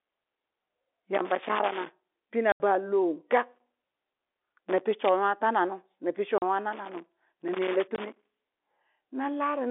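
At 1.15 to 2.27 s a loose connector crackle breaks out. A worn or dirty contact is making and breaking as it shifts. The speech gets chopped, so the burst sounds like irregular scratching. It returns from 3.55 to 4.81 s and again from 6.73 to 8.51 s. That last run is the longest.

Packet loss filled with silence first appears at 2.52 to 2.60 s. This is an 80 ms hole. The receiver had nothing to play there and played silence. A 40 ms gap follows at 6.38 to 6.42 s. A 20 ms gap falls at 7.96 to 7.98 s, inside the third crackle burst. These lengths are all multiples of 20 ms, which fits 20 ms packets. The G.711 telephone coding gives the narrow 300 Hz to 3.6 kHz telephone band.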